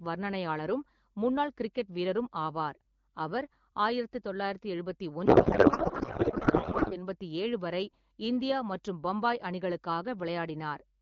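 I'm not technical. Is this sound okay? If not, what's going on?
No. From about 5.25 to 6.97 seconds, the speech turns into garbled, warbling noise that barely follows what is being said, and it clears up just before "எண்பத்தி ஏழு வரை இந்தியா". This is a codec payload misread. The call's HD Voice (AMR wideband) codec packs its data one way, but the receiving end unpacked it as if it used a different, tighter layout. It then read the pieces from the wrong places and rebuilt nonsense until the two sides matched up again.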